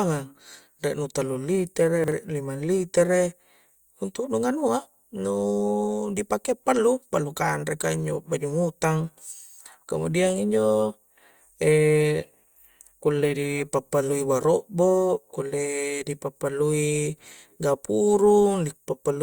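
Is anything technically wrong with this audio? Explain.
Yes. At 2.04 to 2.12 s, chunks out of order: a 40 ms block arrives one chunk late, swapping places, so the speech briefly jumbles across three hard joins.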